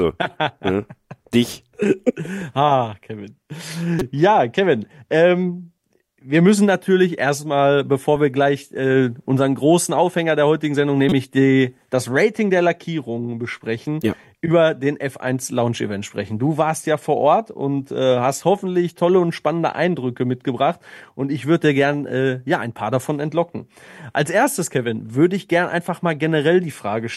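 Two short bursts, at 3.99 to 4.02 s and 11.09 to 11.12 s, are corrupt frames decoded: damaged compressed data played back as misplaced energy, peaking around -10 and -5 dBFS.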